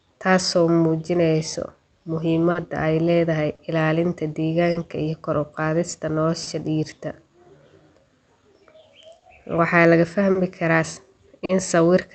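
The sender's audio clock runs roughly 4 percent slower than the receiver's, a clock drift between sender and receiver that starves the jitter buffer for the whole clip. The speech arrives too slowly to keep pace, so timing hiccups keep recurring at uneven intervals.

From 0.18 s to 8.74 s the receiver makes repeated timing corrections, stretching playback to about 98 percent speed by repeating short pieces. Around 150 ms is added in total. The corrections are small and irregularly spaced.

When packets arrive late, the buffer runs dry and the receiver holds the last sound for 40 ms, then resumes where it stopped, so nothing is lost. These short stalls from late packets fall at 2.51, 3.55, 4.71, 6.43, 9.19, 10.31 and 11.45 s. Each is a brief held stretch, heard through the Opus call path with its 8 kHz bandwidth.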